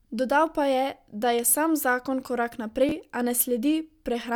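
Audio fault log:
2.89–2.91 s, chunks out of order: between "je sam zakon korak" and "a ne", an 11.61 ms chunk plays one slot late, which scrambles the speech briefly and leaves three hard joins. On a spectrogram these show as three thin vertical broadband lines, and the waveform shows matching step discontinuities.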